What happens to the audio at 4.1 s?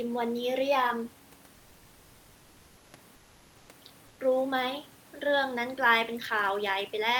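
From 4.07 to 4.19 s, about 120 ms, the room background, which sits roughly 29 dB below the speech, is replaced by comfort noise. The likely cause is discontinuous transmission: the sender stops sending audio during a pause, and the receiver fills the gap with synthetic noise shaped to approximate the background. The result is a brief, smooth, featureless hiss, about 2 dB quieter than the real room sound, that loses the room's texture until the real signal resumes.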